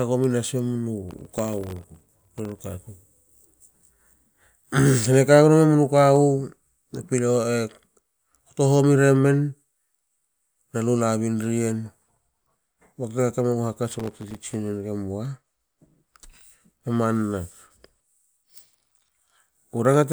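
From 1.09 to 2.63 s, and again from 13.92 to 14.55 s, a gritty burst of crackle tears through the speech, then stops cleanly. This is processor overload crackle. The processor repeatedly missed its deadlines for very short buffers, each well under a millisecond, and every miss left a tiny hard-edged gap of silence. Dozens of these dropouts in quick succession blur into the rough tearing texture, which ends as soon as the load eases.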